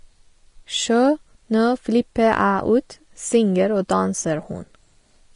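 Vorbis compression, audible throughout this speech recording: the treble stops dead at about 10.6 kHz, and the upper band has turned hissy and grainy, with smeared consonant onsets. This is likely a low-quality Vorbis encode, with damage plain enough to suggest a rate near 32 kbps. Hard clipping from 2.24 to 2.44 s: peaks overshoot the available range by about 2 dB and get sliced flat, and those squared tops throw off high harmonics heard as a brief crackly roughness on the loudest moments.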